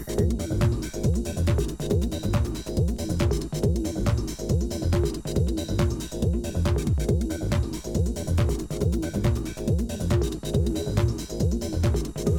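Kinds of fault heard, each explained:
No faults can be heard.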